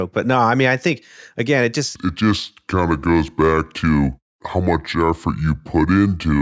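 From about 1.96 s, just after "I think again it", the speech drops abruptly into a lower, slower register and stays there to the end: everything runs at about two thirds of its proper speed and sits roughly 7 semitones flat. This is a wrong sample rate fault. The samples are being read out more slowly than they were captured, with no resampling, so timing and pitch shift together by the same ratio. A ratio of 0.667 fits audio recorded at 24 kHz but played back at 16 kHz.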